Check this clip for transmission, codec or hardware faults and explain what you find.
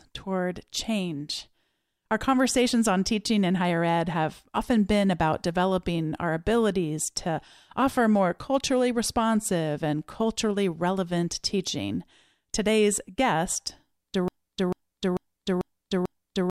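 One fault appears, a broken-record loop at the very end of the speech.

From 14.28 s to the end, at 16.51 s, a fragment of about 0.44 s plays five times back to back, identical each pass, so the sound stutters mechanically instead of continuing. The likely cause is a player, encoder or stream that stalled and kept resending the last piece it held, so whatever should have followed is lost. On a waveform or spectrogram, the same shape repeats exactly at 0.44 s intervals through to the end.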